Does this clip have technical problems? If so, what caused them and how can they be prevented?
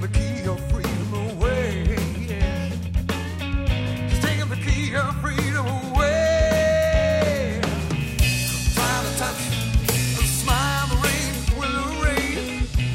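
Yes. From 8.01 to 11.52 s there's pre-emphasis left on: the treble was boosted, 50 µs FM-style, and never de-emphasised, so 10 kHz sits about 11 dB hot relative to 1 kHz, making the sound thin, bright and sibilant. To prevent it, match every emphasis stage with its de-emphasis curve.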